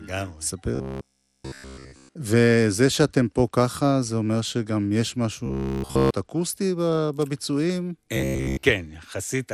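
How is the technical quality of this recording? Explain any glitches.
The recording is technically poor, with constant codec damage and three stretches of robotic buzzing.

MP2 compression affects the whole speech clip, most likely from MPEG Layer II coding at a low rate, around 80 kbps. The encoder splits the signal into 32 sub-bands and cannot fund all of them with bits, so upper bands drop out and switch back in while the surviving bands are quantised coarsely. The damage is plainly audible as a dull top end with gurgling, granular distortion that shifts from moment to moment.

Robotic sound from repeated short buffers occurs at 0.76 to 2.15 s, 5.46 to 6.11 s and 8.17 to 8.63 s. It is likely caused by audio arriving too slowly, so the playback software loops the last fragment instead of waiting. The loop repeats every 15 ms, which imposes a fixed buzz at 66.7 Hz. In the first two stretches essentially all of the audio is replaced by repeats, and in the last most of it is. 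The speech becomes a rigid, metallic drone that only loosely follows the original.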